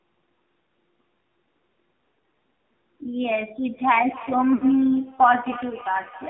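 Throughout the speech, the signal has been squeezed through the AMR narrowband mobile codec at a very low mode, with damage that fits a rate around 5.9 kbps. The codec rebuilds each frame from a coarse vocal-tract model excited by a handful of pulses, so at this bitrate the voice turns buzzy and synthetic. The line band runs only from about 200 Hz to 3.4 kHz, leaving the sound thin and muffled.

At about 1.74 s, a single 20 ms stretch shows lost AMR speech frames. The decoder had no valid data for that slot and filled it by repeating the previous pitch and filter settings at reduced gain, which is heard as a brief dip or warble.

From 3.73 s to the end, a feedback echo between two devices appears. A second device on the same call in the same room replays the far end, and that microphone sends it back. Each phrase returns roughly a third of a second later, thinner and more ringing, peaking at about 16 dB below the direct speech.

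From 4.54 to 4.65 s comes a longer run of lost AMR speech frames, consistent with about four consecutive frames failing. The decoder stretched its last good parameters while fading them, so the sound smears out, sinks towards silence over about 80 ms, and then resumes weak and rough for a moment.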